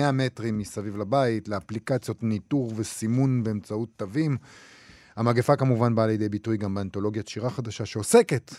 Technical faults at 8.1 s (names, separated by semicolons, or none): none